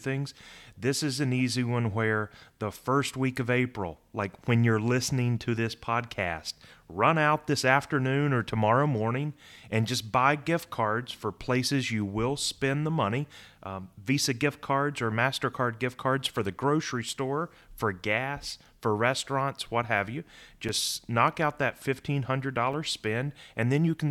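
From 16.58 s to 22.73 s, regular ticks cut into the speech about once every 1.02 s. These are periodic USB or driver dropouts: something briefly stalls the audio path, and each time a few milliseconds of sound vanish into silence, leaving a small click.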